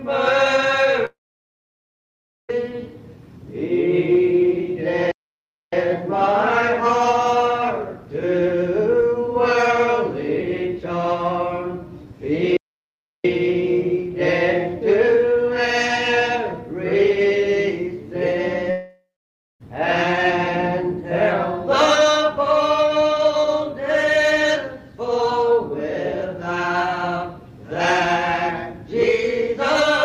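At 1.05 s the sound breaks off into a brief fading buzz that collapses to silence, and the audio returns at 2.51 s with about 1.44 s of material simply gone. This is a long network dropout: for well over a second no packets likely arrived. The receiver stretched the last sound for a moment, then, with nothing to extend, left about 1.35 s of silence before the later audio picked up without the missing stretch.

From 5.11 to 5.73 s the output stops dead in mid-flow for about 0.61 s, then carries on. The same happens from 12.57 to 13.25 s, a gap of about 0.68 s. These are playback stalls. Unlike the dropouts, there is no fading tail, just an abrupt cut to silence and a restart. This points to the player being starved of data or blocked until it could resume output.

At 18.71 s a second long network dropout follows the same pattern. The concealed tail lasts longer here, roughly a third of a second of decaying buzz, before about 0.56 s of silence. 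About 0.9 s of audio never arrives, and the sound resumes at 19.62 s past the lost section. The likely cause is again a run of network packets that were lost or delayed beyond use.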